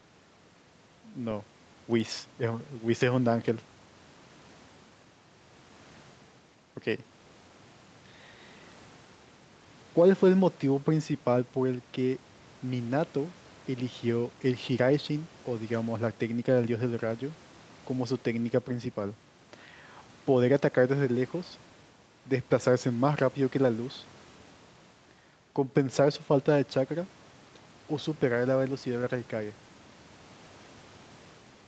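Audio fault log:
The speech has passed through a call's microphone processing and WebRTC call path with an Opus-style codec, with no content above about 8 kHz, and no faults are present.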